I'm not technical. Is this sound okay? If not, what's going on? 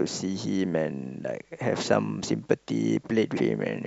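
No. Near the end, from about 3.33 to 3.38 s, there is damaged data in a compressed stream: a short stretch of the stored speech file is corrupted, so the player misreads it and briefly loses its place. You hear this as a quick chirp or blip.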